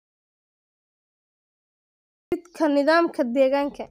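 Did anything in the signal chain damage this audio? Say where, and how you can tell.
Yes. An audio dropout to silence runs from the very start of the clip to 2.32 s. The speech is absent for that stretch, and the gap is silence with no room tone or noise floor, then speech begins abruptly. That points to the input stage rather than the room: the likely cause is a lost input, such as a disconnected device, a failed link or a mute. The recorder kept writing silence, so whatever was said during it is unrecoverable.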